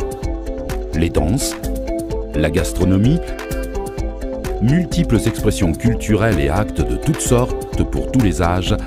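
No technical faults occur anywhere in the clip.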